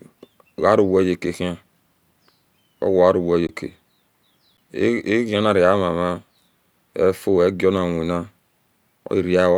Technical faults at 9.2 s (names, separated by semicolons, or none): none